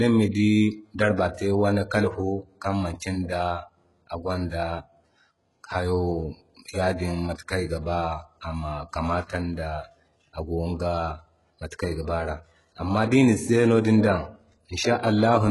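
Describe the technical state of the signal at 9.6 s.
At 9.6 s, as across the whole speech clip, the treble is heavily damaged and nothing is left above 11.5 kHz, likely from HE-AAC compression at a rate that fits about 12 kbps. The upper band is copied up from lower bands rather than coded, so s sounds turn gritty and metallic instead of simply dull as with a plain low-pass cut.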